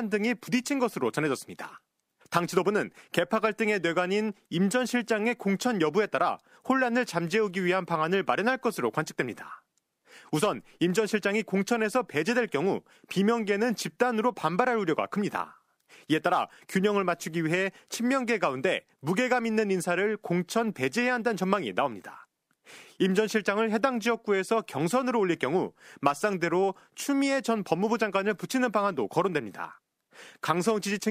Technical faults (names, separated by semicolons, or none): none